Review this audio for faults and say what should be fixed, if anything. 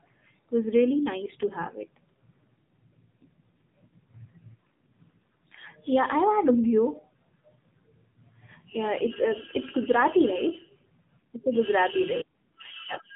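The whole clip carries AMR narrowband mobile codec damage. Nothing passes above about 3.8 kHz. The speech sounds buzzy and synthetic, as a vocal-tract model rebuilds it from sparse pulses. That points to a low AMR-NB mode near 7.4 kbps. Capture or route the call over a wideband path, or raise the AMR-NB bitrate, to prevent it.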